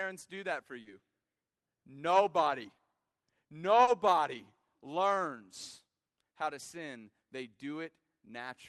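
A speech recording with short concealed packet loss at 0.81 to 0.87 s and 3.83 to 3.89 s. About 40 ms went missing each time and was bridged with extrapolated sound, leaving a brief smear rather than the silent gap of a plain dropout.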